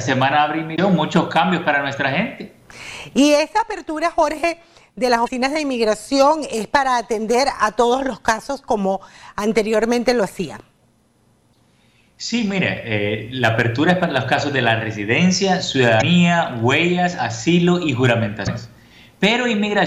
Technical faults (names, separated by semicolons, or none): damaged data in a compressed stream